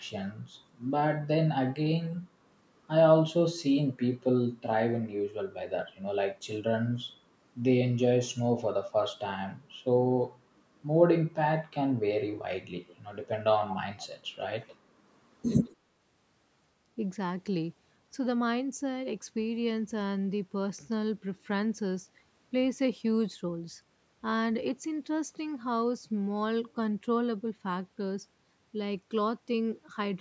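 Faint, delayed scraps of speech trailing about 147 ms behind, well below the main voice, appear at 12.87–12.96, 14.23–14.27, 14.59–14.76 and 15.64–15.76 s. This is echo leak, likely from a loudspeaker-side echo canceller letting residue through.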